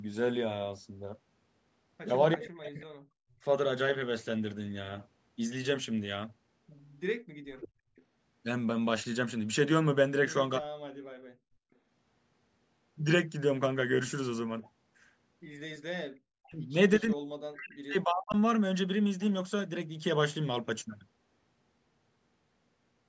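From 2.33 to 2.86 s, an echo leak: a faint copy of the speech about 25 dB down returns 341 ms late, likely from a loudspeaker path the echo canceller did not fully remove. Overlapping it, from 2.35 to 3.42 s, speech is suppressed in double talk: the talker dips by up to about 40 dB in pieces, likely because the canceller attenuated both sides during simultaneous talk. The echo leak recurs at 7.58 to 8.03 s, louder at about 15 dB below the speech. The suppression returns at 10.59 to 11.31 s. A brief, faint echo at about 30 dB down appears at 14.62 to 14.70 s. The longest suppression runs from 16.16 to 18.36 s, with the speech cutting out in stretches.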